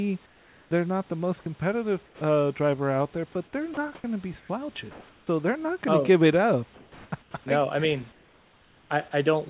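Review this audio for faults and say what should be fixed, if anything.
In the pauses at 0.26–0.71 s, 3.74–5.27 s, 6.74–7.34 s and 8.12–8.9 s, the room background turns into a flat, featureless hiss; in the first and last of these it is about 4 dB quieter than the real room noise, which sits about 34 dB below the speech. This is comfort noise in place of the background, likely from discontinuous transmission: the sender stopped sending during silence, and the receiver synthesised roughly matching noise until the speech resumed. Disabling DTX, or improving the comfort-noise spectral and level updates, would keep the background continuous.

Speech is cut off at 1.43–1.46 s, 2.06–2.21 s, 3.74–3.77 s and 7.22–7.34 s, where brief stretches of speech give way to steady noise. The missing audio is about 20, 80, 30 and 50 ms respectively. This is sound dropped by the voice detector, likely because it misjudged the speech as background and stopped sending, so comfort noise filled those gaps. 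The audio is band-limited near 4 kHz throughout, as on a narrowband G.711 call. A less aggressive voice-detector threshold with longer hangover time would prevent these cut-offs.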